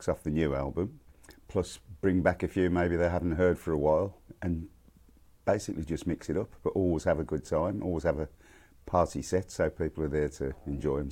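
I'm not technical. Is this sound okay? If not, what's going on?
Yes, no faults to hear.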